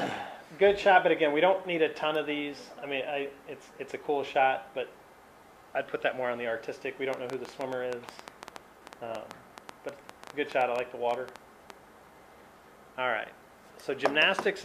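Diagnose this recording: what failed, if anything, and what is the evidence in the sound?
A train of clicks runs from 7.14 to 11.71 s: around thirty similar pulses at about 7.2 per second, unevenly spaced and peaking roughly 10 dB above the sound. This is likely interference coupling into the analogue wiring or a faulty connection or power supply injecting repeated spikes.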